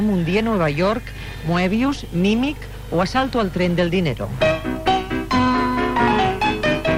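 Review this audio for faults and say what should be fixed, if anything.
Nothing in this audio needs to be fixed.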